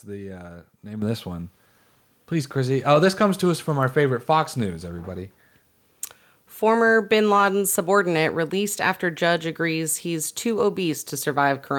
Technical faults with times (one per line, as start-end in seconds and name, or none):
1.02 microphone volume stepped up